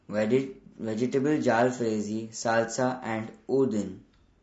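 Low-delay AAC compression runs throughout: the speech sounds plainly rough and grainy, likely from AAC-ELD coding at a low bitrate around 32 kbps.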